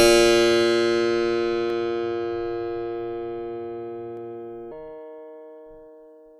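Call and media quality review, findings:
Dropped samples at 1.70 s and 4.17 s: single sharp clicks in the music, each a thin vertical line across the spectrum. A fraction of a millisecond of samples missing, so the waveform jumps straight to a later value. Likely a buffer underrun or discontinuity in the playback or capture stream.

Section at the wrong speed, 4.72 s to the end: music suddenly plays 1.34 times faster, pitch raised about five semitones, tempo hurried. Speed and pitch shift together, consistent with likely resampling against the wrong clock rate for this final segment.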